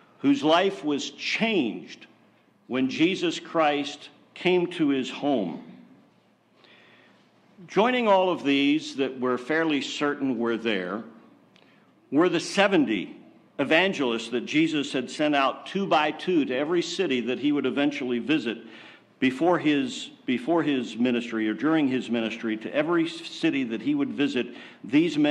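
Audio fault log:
No fault is heard anywhere in the audio. There is nothing here to log.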